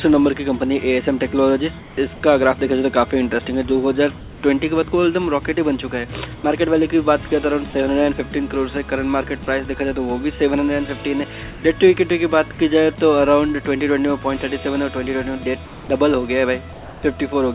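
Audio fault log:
1.79–1.97, 4.19–4.43, 6.35–6.44 and 15.65–15.89 s, comfort noise in place of the background: in each gap the real background, sitting about 20 dB under the loud parts, turns into a flat, featureless hiss about 2 to 4 dB quieter for 90 to 240 ms. That's likely discontinuous transmission, with the receiver filling the pause with synthetic noise.
7.28–7.73 s, sound chopped by the voice detector: the sound stutters here, with about 60 ms in total swapped for smooth fill. The likely cause is the sender's voice detector switching between sending and not sending more than once in under half a second.
11.51–11.63, 12.53–12.59 and 16.73–17.03 s, sound dropped by the voice detector: quiet sound drops out for about 50, 40 and 130 ms, and steady noise lasting 120, 60 and 300 ms takes its place before the sound returns, all band-limited to 4 kHz like the rest of the call. Likely the detector mistook that quiet sound for background and stopped sending.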